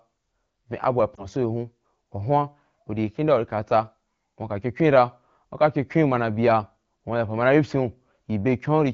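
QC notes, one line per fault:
1.15–1.27 s lost AMR speech frames: the decoder filled one missing 20 ms frame by reusing the last good pitch and vocal tract settings at reduced gain, heard as a brief dip or warble.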